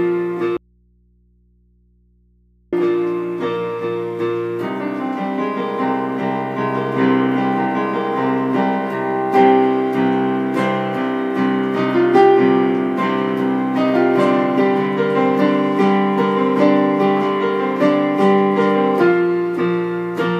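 From 0.57 to 2.73 s the sound snaps to faint hum, an audio dropout to a faint residue, likely the signal lost while the input stayed live.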